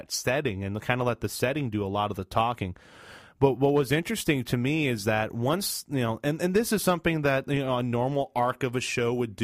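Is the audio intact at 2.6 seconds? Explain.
No. At 2.6 seconds the speech carries sample clock jitter, which runs through the whole clip. The converter's timing wanders by around two microseconds, so each sample lands slightly off its proper instant, and the resulting error grows wherever the waveform changes quickly. It sits roughly 35 dB below the signal as a grainy hiss on loud and bright sounds. Unlike a steady noise floor, it drops away in the pauses.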